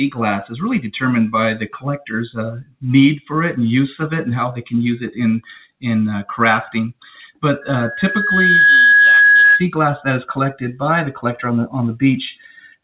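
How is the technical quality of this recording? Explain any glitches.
Two real glitches here, and the whole thing sounds band-limited to about 4 kHz, which fits a G.711 mu-law call link.

From 2.56 to 2.84 s the sound is cut by the noise suppressor. It mistook the sound for noise and pulled it down by up to about 18 dB, for roughly a fifth of a second.

From 7.61 to 9.66 s there's a loudspeaker feedback squeal. The mic picks up its own speaker, and a 1.7 kHz tone swells over about a second to roughly 10 dB above everything else.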